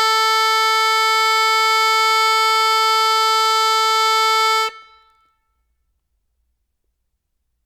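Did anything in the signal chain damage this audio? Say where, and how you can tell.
No, nothing in the signal chain has damaged this music. There is no moment in the clip where any stage can be heard acting on the sound.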